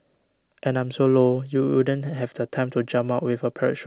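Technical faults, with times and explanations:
Nothing stood out on listening to this speech clip.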